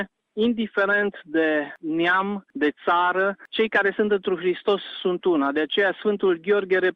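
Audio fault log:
No faults found in this clip.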